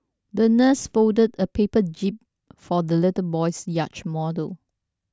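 Nothing stood out on listening to this speech clip.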